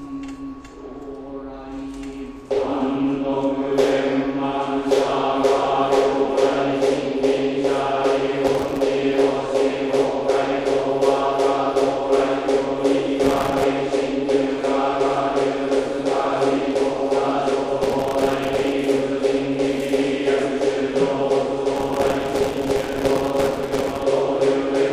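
Processor overload crackle occurs at 8.47 to 8.82 s, 13.24 to 13.64 s, 17.83 to 18.72 s and 21.76 to 24.02 s. The processor repeatedly misses deadlines for very short buffers of around 1.5 ms, leaving dozens of tiny silent gaps in each burst, and a few hundred in the longest and final stretch. These hard-edged dropouts tear through the sound as gritty crackle until each burst ends.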